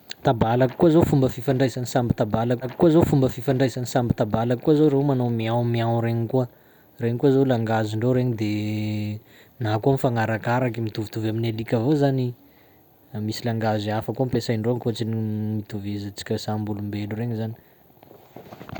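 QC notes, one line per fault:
2.61–4.61 s, stream segment repeated: two seconds of speech play again after a small blip at the jump back, as the player queued the same segment twice.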